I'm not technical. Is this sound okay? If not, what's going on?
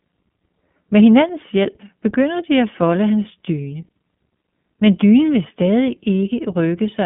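No, not quite. The whole clip has gone through the iLBC codec, an internet-phone voice squeezer. It cuts everything above about 3.7 kHz, so speech sounds muffled and phone-like, and because it rebuilds the voice in separate 20 ms chunks, there's a plainly audible rough, slightly synthetic edge.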